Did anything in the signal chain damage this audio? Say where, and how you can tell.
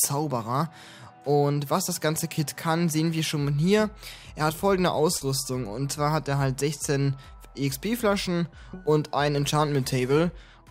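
Yes. At the network stage, short concealed packet loss at 5.17–5.22 s dropped 40 ms, which the decoder filled by continuing the preceding sound. On a spectrogram it appears as a smeared, repetitive patch.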